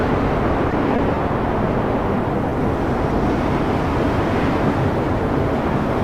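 The audio has two network timing faults. From 0.71 to 1.32 s there is a stutter of repeated stalls. Packets arrived late or slower than playback, so the jitter buffer ran dry five times and the receiver extended the last sound each time. The gaps total about 60 ms, the longest 20 ms, about a tenth of that span. Nothing is lost, but the sound drags and hiccups. On a spectrogram, each gap shows as a short stretch of frozen, smeared harmonics. On the waveform, the cycles repeat and then resume slightly late. At 2.49 to 2.54 s there is a single short stall from a late packet. The buffer emptied once, and the receiver held the last sound for 20 ms until the packet arrived, adding about 20 ms of delay from that point on. It is heard as one briefly prolonged moment with a slight buzz or dip. On a spectrogram, that moment shows as one narrow band of held, repeated texture. On the waveform, a short run of repeated periods pushes everything after it slightly later.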